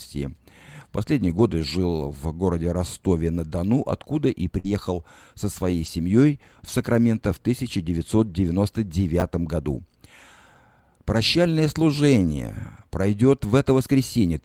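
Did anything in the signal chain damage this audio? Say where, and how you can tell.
Yes. The network path dropped packets repeatedly, and Opus in-band FEC covered them, so these are lost packets rebuilt from error correction. You hear rougher, noisier patches with no gaps at 1.25–1.39 s (just before "жил в городе"), 4.64–4.74, 5.66–5.88, 6.78–6.80, 8.18–8.28, 9.70–9.76 and 12.77–12.83 s. Each patch is a low-bitrate copy riding in the next packet. The longest stretch, about 120 ms, fits several consecutive packets.

There's also a short concealed packet loss at 4.59–4.66 s, right after "откуда и", overlapping the FEC patch there. About 40 ms never arrived, and the decoder stretched the previous sound across the hole before blending back. That leaves a brief smear or wobble instead of a clean transition.

At 9.20–9.22 s, chunks play out of order. A 10 ms chunk landed one slot late, probably in the receive buffer or the write path, so it plays after audio that should follow it. 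Nothing is missing, but the swap creates three hard joins, which you hear as a brief jumbled moment.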